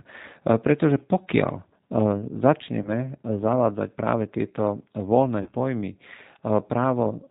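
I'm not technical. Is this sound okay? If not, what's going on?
No. Throughout, the speech sounds a little rough, thin and artificial, with no crisp high end. That comes from the G.729 codec, a phone-call compression method that rebuilds the voice from a simplified model and drops everything above about 4 kHz.

At about 2.82 to 2.90 s and again at 5.43 to 5.52 s, the voice briefly turns into a buzzy or noisy, smeared sound that fades and then recovers. This is VoIP packet loss concealed by the speech codec. About 30 ms of audio went missing each time, and the decoder filled the gap by stretching the last sound it had.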